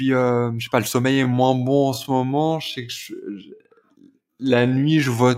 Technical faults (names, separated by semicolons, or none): time-stretched section